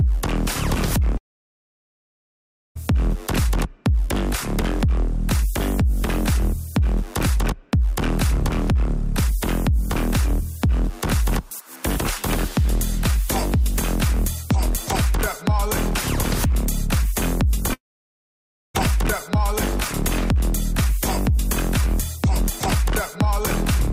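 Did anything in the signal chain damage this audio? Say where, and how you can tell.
Yes, at the network stage, most likely a long network dropout, twice: from 1.17 to 2.77 s, roughly 1.6 s, and from 17.73 to 18.76 s, about 1.0 s. In each gap the last sound is briefly carried on as a fading buzz or hiss, then decays into near silence for most of the stretch. When the audio resumes, nothing from the gap is recovered. The receiver kept filling while no packets arrived, and the concealment faded out before the stream returned.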